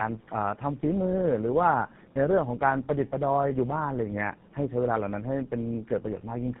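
Throughout, the speech sounds rough, muffled and warbly, with nothing above about 3.8 kHz. This is tandem speech coding: the sound suggests three low-rate speech codecs in a row, likely G.729A then GSM full rate twice, each re-coding the previous coder's damaged output.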